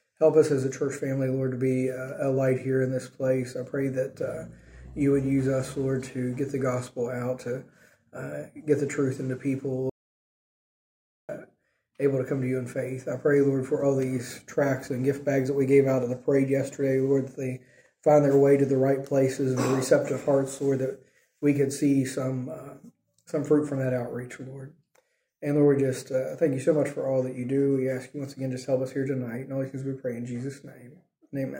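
At 9.90 s the sound cuts off abruptly into an audio dropout to silence. The gap lasts until 11.29 s, about 1.39 s. It is silent, with no room tone underneath. The input was likely lost, with silence written meanwhile. Whatever happened then is gone.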